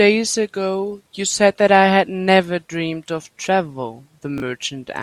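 Chunks out of order at 4.38 to 4.42 s: two 20 ms pieces of the speech swap places, so the chunk that belongs first arrives one chunk late and plays after its successor. No audio is missing, but the sequence is wrong, with three hard joins where the displaced pieces meet their neighbours. The result is a brief jumbled, garbled instant near the end of the clip, lasting about 40 ms.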